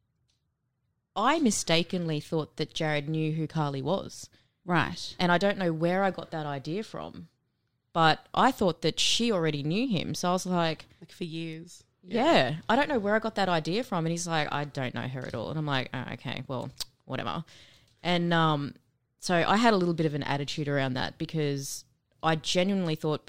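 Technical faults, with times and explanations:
No technical faults can be heard anywhere in the recording.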